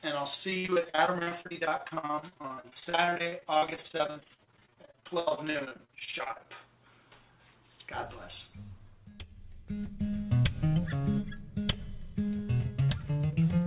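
From 0.5 s to 6.48 s the sound breaks up with repeated packet loss, giving a choppy, robotic quality. About a hundred short holes follow one another, the longest about 69 ms. Each is patched by stretching the preceding sound, so roughly 40% of that stretch is concealment. On a spectrogram, which shows nothing above 4 kHz from the narrowband call path, the span looks smeared and repetitive with frequent breaks. The waveform shows a chopped, stuttering envelope.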